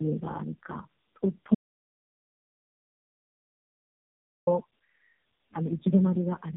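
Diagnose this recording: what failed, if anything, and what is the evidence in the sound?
The codec stage failed through tandem speech coding. The speech is rough, muffled and warbly throughout, with nothing above 3.7 kHz. The damage points to about four low-rate speech coders in series, each re-coding the previous one's already degraded output.

There is an audio dropout to silence from 1.55 s to 4.47 s, losing about 2.9 s. The sound cuts out mid-flow into silence with no room tone. The likely cause is a lost input or link upstream while recording continued.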